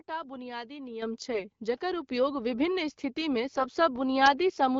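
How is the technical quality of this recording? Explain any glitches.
Two kinds of glitch stand out: two sudden level jumps and a short burst of corrupted sound. Beneath them, the light smoothing typical of AMR wideband (HD Voice) coding at a mid rate can be heard.

Microphone volume stepped up, at 1.02 s and again at 2.04 s. The call software judged the microphone too quiet and raised the device's input gain in a single step, by about 8 dB and then about 4 dB. Speech and background noise jump louder together at each point, with no gradual ramp.

AMR bit errors, from 1.32 to 1.45 s. A weak link flipped some of the less protected bits in the coded frames while the checks on the core bits still passed. That span points to about three damaged frames. The decoder placed its excitation pulses wrongly and used slightly wrong pitch, gain and spectral values, so the speech there keeps roughly its pitch and loudness but turns hoarse, scratchy and gargly.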